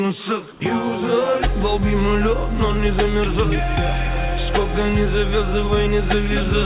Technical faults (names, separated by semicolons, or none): comfort noise in place of the background